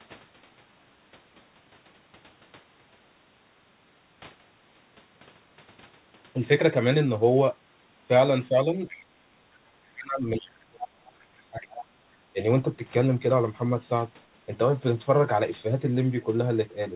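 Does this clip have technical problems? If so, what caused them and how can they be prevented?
Yes. The other side's voice leaking through appears faintly at 8.86–9.03, 10.4–10.46 and 11.65–11.85 s, about 15 to 25 dB under the speech. The likely cause is residual loudspeaker echo that the canceller missed. On a spectrogram it shows as faint harmonic traces that don't line up with the main talker. Using a headset or a better-converged echo canceller would prevent this.

Speech suppressed in double talk appears as level holes at 9.05–9.25, 9.94–11.76 and 12.33–12.39 s, dipping by up to about 35 dB. The likely cause is the canceller ducking everything while both sides talked. On the waveform these look like sudden notches in the envelope. Tuning the double-talk detector to suppress less aggressively would prevent this.

The call path itself, which cuts everything above 4 kHz and fits 64 kbps G.711 mu-law, shows as a flat ceiling across the spectrogram.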